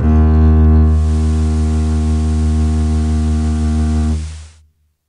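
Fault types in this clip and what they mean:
digital radio blending to analogue: the receiver lost its digital stream and cross-faded over 336 ms to the station's FM broadcast, then back; between 0.80 and 4.63 s the music drops about 5 dB and gains hiss about 25 dB down.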